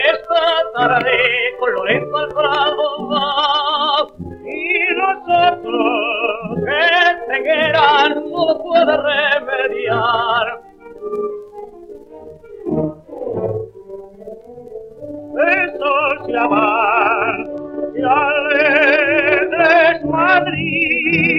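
From 16.83 s to the end, one channel arrives about two samples late, roughly 0.05 ms, and summing the channels to mono produces channel delay (comb filtering): the shared signal cancels in a notch near 10 kHz, leaving the audio's top end dull.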